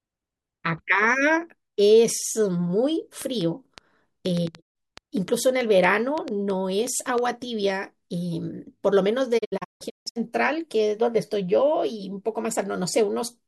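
A speech clip with two kinds of fault. From 3.22 to 7.19 s there is a train of clicks. About fifteen similar pops arrive at an uneven pace, near 3.8 per second, peaking roughly 10 dB above the speech. Interference from nearby equipment is the likely cause. Digital broadcast dropouts cut the sound twice. At 4.60 s it fades out over 20 ms and stays silent for about 130 ms, which fits four lost frames. Between 9.37 and 10.18 s the audio breaks into several holes. Together they remove 512 ms, and the longest run is 160 ms. That sound is gone.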